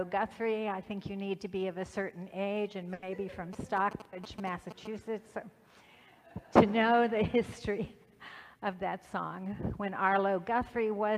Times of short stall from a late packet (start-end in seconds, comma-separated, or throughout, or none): 2.93-3.04